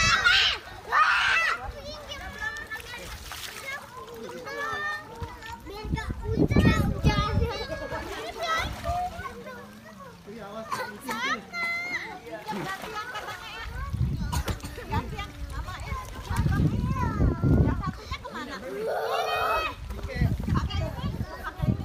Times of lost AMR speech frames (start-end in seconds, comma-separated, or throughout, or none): none